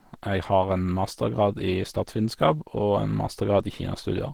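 From start to finish the speech carries Opus compression, likely from a low bitrate near 16 kbps. The encoder appears to be in its hybrid mode, so the voice comes out muffled and hoarse, with a grainy, rough edge on vowels. The damage is plainly audible. A spectrogram shows content reaching about 20.2 kHz, but the upper bands look smeared and noise-filled rather than harmonic. The waveform envelope stays intact.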